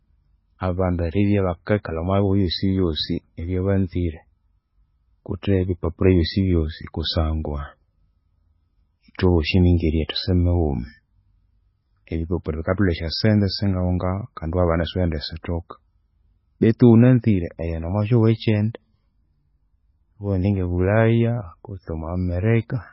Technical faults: MP3 compression; pre-echo

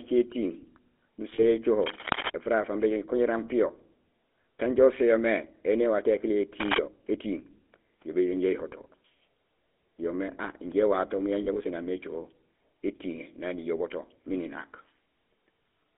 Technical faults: GSM full-rate codec; lost GSM frames

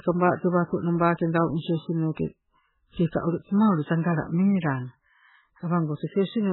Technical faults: MP3 compression

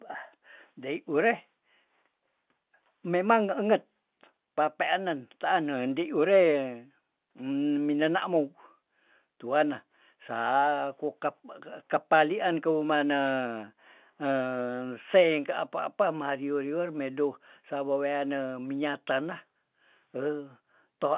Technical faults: none

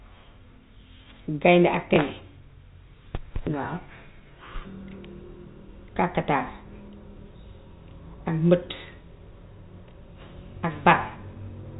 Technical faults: packet loss with last packet repeated

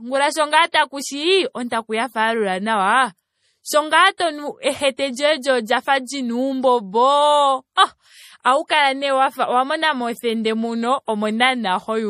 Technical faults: MP3 compression; pre-echo

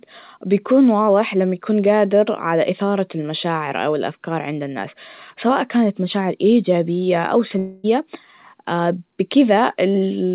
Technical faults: long network dropout

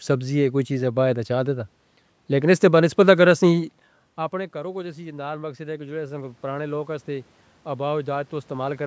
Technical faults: automatic gain rising

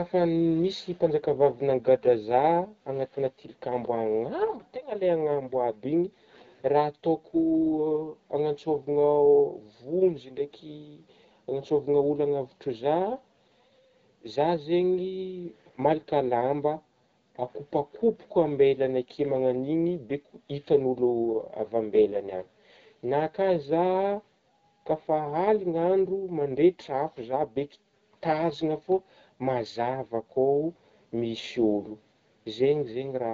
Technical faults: none

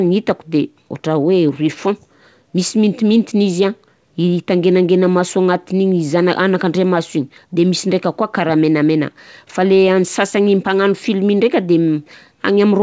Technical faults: none

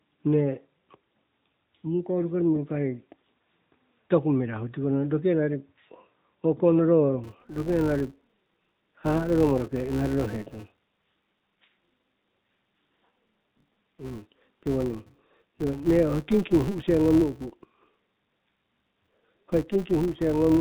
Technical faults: AMR narrowband mobile codec; filter restarted on every block

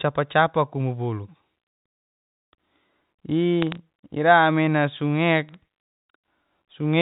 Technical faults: bit errors on a digital phone line

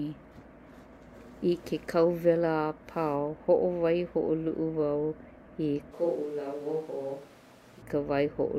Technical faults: switch to a distant microphone

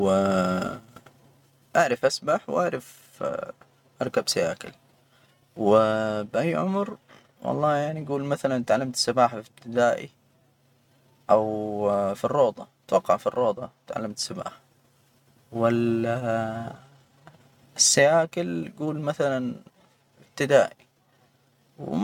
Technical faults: none

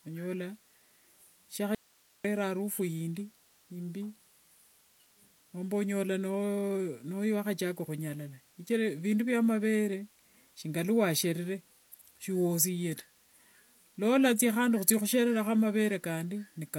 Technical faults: audio dropout to a faint residue

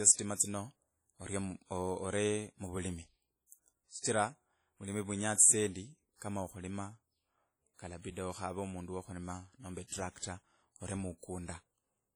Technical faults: WMA compression

